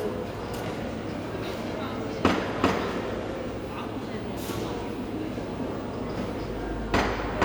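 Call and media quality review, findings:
Nothing stood out on listening to the recording.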